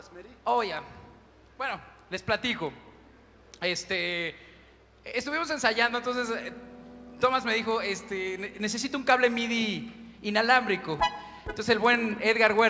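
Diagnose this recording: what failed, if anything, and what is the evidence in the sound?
The failure is a resampler restarted on every block, at the sample-rate conversion stage. There's a steady 100 Hz buzz under the sound for the whole clip, only while signal is present. The 24 kHz to 16 kHz converter is processing 10 ms blocks in isolation, so every block edge picks up a small error.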